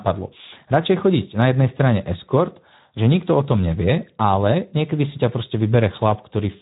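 Speex codec damage runs throughout the speech, consistent with about 11 kbps; too few excitation bits leave the sound noticeably noisy and hoarse.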